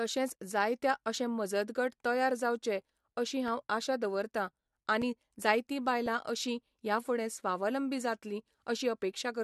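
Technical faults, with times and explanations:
0.30, 3.48, 5.02 and 6.06 s: block of digital silence. Output samples dropped to zero for 1.4 to 3.9 ms (two gaps fit a 128-sample buffer), so abrupt edges make short ticks.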